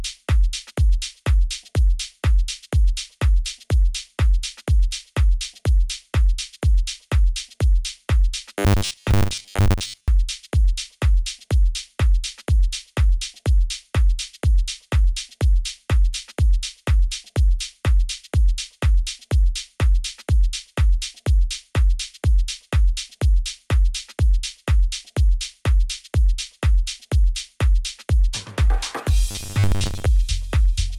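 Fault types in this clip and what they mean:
Robotic sound from repeated short buffers, 8.59 to 10.08 s and 29.31 to 30.09 s: the audio turns into a rigid, metallic buzz pitched at 100 Hz, which fits a 10 ms stretch being replayed over and over. The likely cause is that fresh audio arrived too seldom, so playback filled the gaps by looping the last short buffer while real material was skipped. Most of the first span and about half of the second are repeats.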